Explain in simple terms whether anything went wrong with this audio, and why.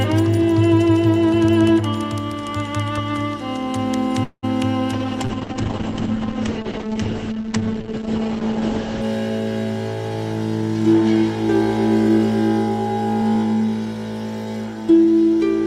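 Three problems can be heard. From 4.23 to 4.45 s there is a call audio freeze: the sound stalls and is stretched into a fading buzz, with about 50 ms of near silence, then picks up where it left off. That gap of about 0.2 s was likely caused by delayed network packets emptying the playback buffer.

From 4.94 to 9.10 s there is a call bitrate drop. The connection gave the sound far less data, so it became coarse and muffled. The highest frequencies reached fell from about 20 kHz to 8 kHz, cutting off the crisp top end until quality returned.

From 14.83 to 15.05 s there is a jitter buffer speed-up. The receiver had built up too much stored audio, so it trimmed tiny slices, a few hundredths of a second in total, to catch up. That short stretch plays about 13% faster without any change in pitch.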